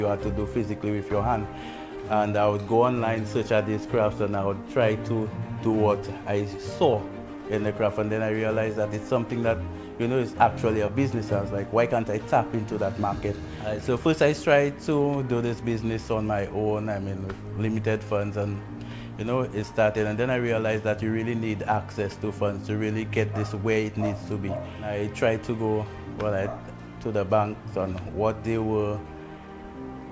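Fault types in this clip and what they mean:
No faults are present.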